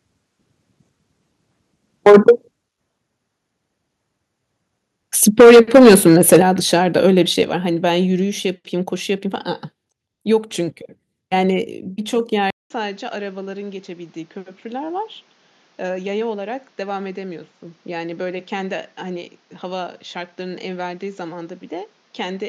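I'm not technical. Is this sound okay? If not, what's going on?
No. The microphone was likely set too sensitive, so the loudest moments hit the limit of what the microphone's converter could capture. This is microphone overload. The tops of those peaks are sliced off, leaving a harsh, crackly edge. You can hear it briefly from 2.06 to 2.31 s, and for about a second from 5.39 to 6.4 s, where the distortion is heavier.

The call software then likely noticed the sound was too hot and turned the microphone down on its own. That is a microphone volume stepped down, and each time it happens the whole sound, background included, gets abruptly quieter. It happens at 2.09, 5.41, 6.42, 7.44 and 11.67 s. The drop at 6.42 s is the most noticeable, and the one at 11.67 s is slight.

At 12.50 s the recording likely jumped from the original microphone to a worse one. This is an input switched to a poorer device. 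There's a short gap of about 0.2 s at the switch. From then to the end, the sound is clearly quieter and duller, so the crisp top end is gone. The new device's own background noise also comes in.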